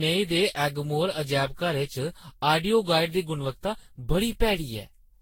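Generation loss runs through the whole speech clip: the sound is swirly, smeared and hollow, with blurred consonant attacks and nothing above 16.7 kHz. This likely comes from around fifteen rounds of lossy decoding and re-encoding, with a character that points to Vorbis near 60 kbit/s. Each round re-quantises the signal on a shifted frame grid, so its noise and spectral gaps build on those left by earlier rounds instead of staying fixed.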